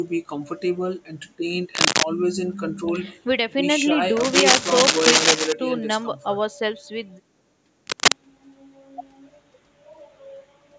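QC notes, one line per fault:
1.73–2.04 s, 4.20–5.53 s and 7.87–8.17 s, cable scratch noise: dense, ragged scratching and rustling rides over the speech, reaching roughly 5 dB above it in the two short bursts and about 10 dB above it in the longer middle one. This is likely a worn cable, connector or control being moved, so its contact resistance jumps rapidly and injects irregular crackle into the signal path.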